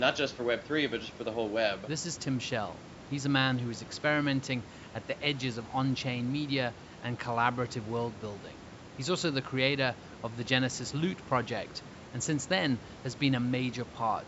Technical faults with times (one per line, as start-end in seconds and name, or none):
none